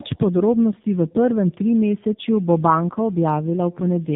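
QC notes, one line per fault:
Throughout: tandem speech coding. The speech went through AMR-NB at 12.2 kbit/s, then G.711 A-law at 64 kbit/s, then AMR-NB again at 6.7 kbit/s. Each border meant a full decode and re-encode. The second AMR-NB stage, at the lower rate, had to model speech the first had already degraded, so its errors stack on the first stage's. The speech comes out rough, muffled and warbly, with nothing above 3.8 kHz.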